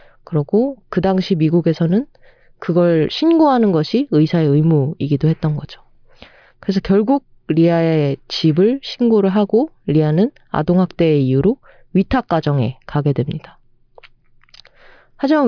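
Speech recording, with no audible technical faults anywhere.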